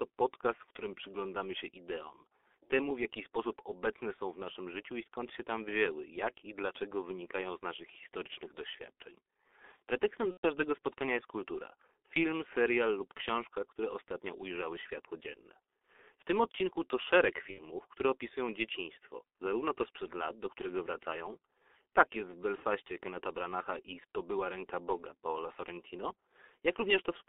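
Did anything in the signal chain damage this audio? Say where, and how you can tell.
Yes. At the codec stage, G.723.1 damage runs through the whole clip. The speech is held within a 300 Hz to 3.5 kHz band and sounds heavily muffled and hoarse, with smeared consonants. That points to a rate around 6 kbit/s with slow-updating 30 ms frames.

At the network stage, VoIP packet loss concealed by the speech codec shows at 10.31–10.46 s, 17.51–17.60 s and 22.55–22.62 s. Each gap, about 120, 60 and 30 ms long, is filled with fading sound as the decoder extrapolates its last pitch and filter.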